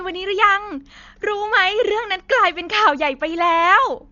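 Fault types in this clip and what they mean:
Dolby Digital compression: the speech sounds dull, with nothing above 6.9 kHz, and a rough, fluttering noise hangs around tonal parts. This heavy damage is likely from AC-3 coding at a rate that fits 40 kbps. Unlike a clean low-pass filter, the remaining band carries noisy fill.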